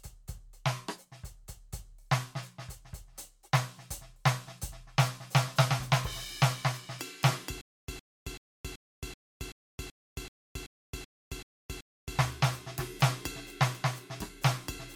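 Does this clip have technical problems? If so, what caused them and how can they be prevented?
Yes. Stutter with silent gaps, 7.61 to 12.19 s: a 110 ms music fragment repeats twelve times every 381 ms between digital silences, likely a stalled player replaying it on each retry. Deeper playback buffering and a steadier data supply would prevent it.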